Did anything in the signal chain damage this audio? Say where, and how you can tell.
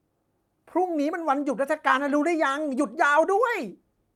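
No, nothing in this speech recording stood out on listening as damage from any stage of the signal chain.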